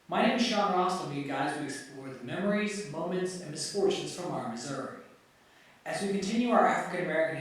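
A short speech recording with no technical faults to report. Nothing in it calls for a time or a cause.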